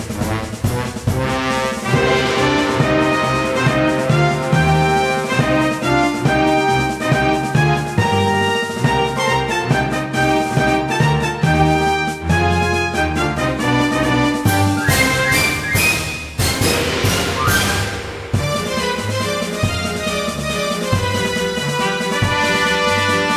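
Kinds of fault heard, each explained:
No dropouts, clipping, distortion, timing glitches or other technical disturbances can be heard anywhere in the signal.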